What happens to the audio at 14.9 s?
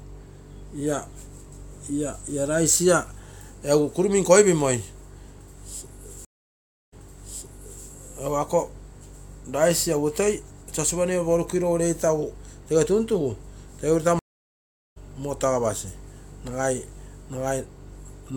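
At 14.9 s the audio is still inside a stream reconnect gap that runs from 14.19 to 14.98 s. The connection dropped, so the player output about 0.77 s of silence, re-established the link and started a new decoder partway through the live stream. When the speech returns it has skipped ahead by roughly 0.7 s, so that stretch of material is missing, and the first frame after the restart fades in.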